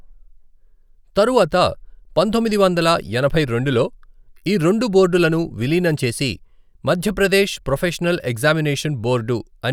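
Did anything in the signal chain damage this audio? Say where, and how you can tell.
No. Nothing in the signal chain damaged this speech.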